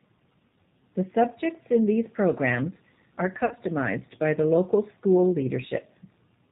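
G.729 coding runs from start to end: the speech is rebuilt from a vocal tract filter, a pitch predictor and a few pulses per 5 ms subframe, which fits an 8 kbit/s stream. Nothing reaches above 4 kHz, and the voice sounds plainly rough and synthetic.

VoIP packet loss concealed by the speech codec occurs from 3.46 to 3.55 s, just after "in these programmes are". About 50 ms of audio went missing, and the decoder stretched its last pitch and filter into a fading buzzy tone or coloured noise. The voice stays weak or distorted briefly after packets resume.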